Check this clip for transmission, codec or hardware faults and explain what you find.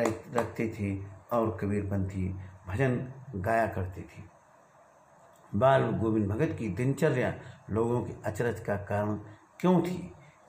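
Nothing wrong can be heard anywhere in the recording.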